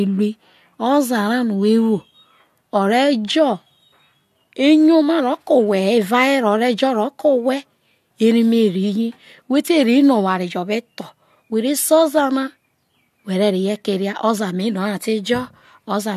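No technical faults can be heard anywhere in this speech recording. Nothing in the audio points to a problem in how it was captured, processed or delivered.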